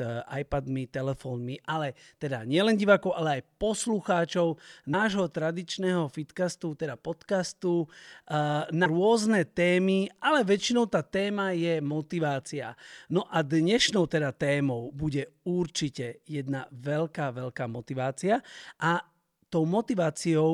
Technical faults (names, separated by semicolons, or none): compressed frames skipped